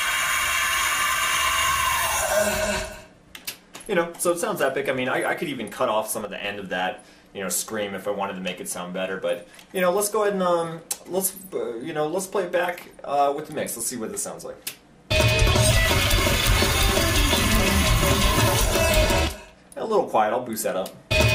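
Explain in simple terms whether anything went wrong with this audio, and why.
At 6.25 seconds the audio suddenly drops to about half its level, background included, then snaps back at 6.44 seconds. This is a sudden gain jump, likely caused by the volume setting changing instantly instead of being eased in gradually.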